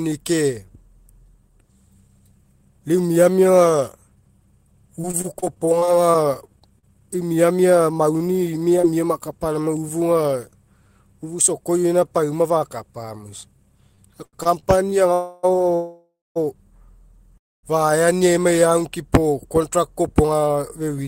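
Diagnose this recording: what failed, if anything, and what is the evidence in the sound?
Network: repeated packet loss (robotic sound) from 5.01 to 6.84 s, before "eu miamia". Fifteen short holes, patched by extending earlier audio, sound choppy. About 220 ms is missing.

Network: scattered short gaps from 7.94 to 8.85 s, after "eu miamia". A few brief holes, each patched over, leave small hiccups in otherwise continuous sound.

Network and jitter buffer: repeated stalls (stutter) from 13.95 to 14.94 s, after "pauma fakapa mo isa". Late packets emptied the buffer five times, the longest wait 86 ms. It drags but loses nothing.

Call audio freeze at 15.14 to 15.45, 15.75 to 16.38 and 17.38 to 17.65 s. The sound holds and fades, twice into silence, then resumes intact. The likely cause is packets held up in transit.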